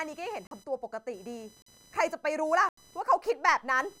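Speech clip with a steady computer activity noise underneath: a buzzy chirp pulsing around 1 kHz, about 30 dB below the voice, from processor or graphics load shifting the audio ground. There are three blocks of digital silence, at 0.47–0.51 s, 1.62–1.66 s and 2.69–2.77 s. They last about 43, 43 and 85 ms, each a short hole with no fade. These are buffers that weren't filled in time, which fits blocks of 2048 samples, the last one a double. Then at 3.25–3.34 s there's a short stretch of DAB burbling, from weak reception letting bit errors through, a small fraction of a percent, into a run of frames.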